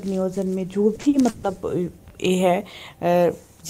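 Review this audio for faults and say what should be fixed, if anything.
Between 0.95 and 1.45 s there is repeated packet loss (robotic sound). Four short holes break up the stream, the longest about 140 ms. Each hole is papered over by stretching the last received sound. About 240 ms, nearly half of that half-second, is concealment rather than real audio, which makes it choppy. On a spectrogram this shows as smeared, repeated harmonic blocks with abrupt edges. The waveform shows cloned cycles and sudden envelope steps. A larger jitter buffer and forward error correction on the network link would prevent it.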